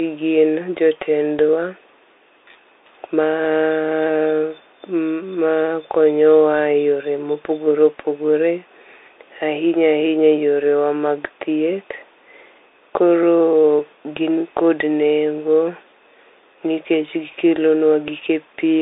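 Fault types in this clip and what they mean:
Bluetooth CVSD headset codec: the whole clip goes through a one-bit delta coder with an adapting step, so the speech is boxed into about 300 Hz to 3.7 kHz with nothing above 3.8 kHz, and it has scratchy s sounds, grit on loud bright moments and grainy hiss underneath.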